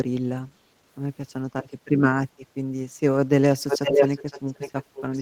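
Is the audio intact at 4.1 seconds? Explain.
No. At 4.1 seconds the audio is inside an echo leak that runs from 3.68 s to the end of the clip. The likely cause is a far-end echo canceller that failed to remove what its microphone picked up from a loudspeaker playing the call, so that sound was sent back. The result is a second copy of the speech trailing the original by about half a second (512 ms), roughly as loud as the speech itself.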